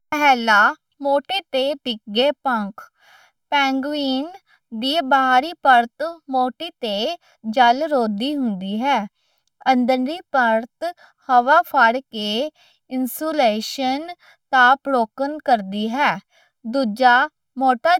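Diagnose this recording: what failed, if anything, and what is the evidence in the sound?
Channel delay (comb filtering) at the buffer stage: hollow speech throughout, with fixed notches from near 400 Hz, as one channel lags about 1.5 ms before mono summing.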